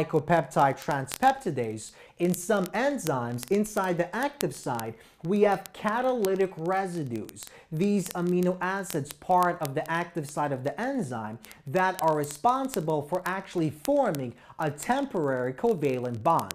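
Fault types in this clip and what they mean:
Word clock ticks: The receiving device runs on its own clock, not locked to the sender's digital link. Here the two clocks differ by roughly 0.1 percent. They slip past each other about every 0.02 s, so one sample is dropped or repeated around 50 times a second. At that pace the ticks merge into a steady rattle or buzz. It runs from 0.12 s to 16.53 s, hundreds of events in all.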